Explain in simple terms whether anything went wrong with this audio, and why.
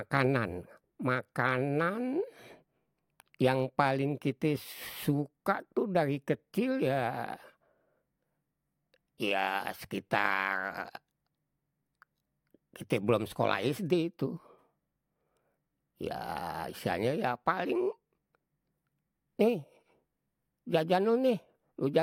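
Nothing went wrong with this audio, because no faults can be heard anywhere in the speech.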